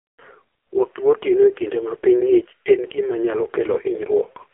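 From start to finish the speech carries AMR narrowband mobile codec damage. Nothing survives above about 3.7 kHz, and the line band sits around 300 Hz to 3.5 kHz. A simple telephone filter would only dull the voice. Here the damage is heavy: a buzzy, synthetic edge from the vocal-tract model being fed too few excitation pulses per 5 ms, which fits AMR-NB running at its very low 5.15 kbps mode.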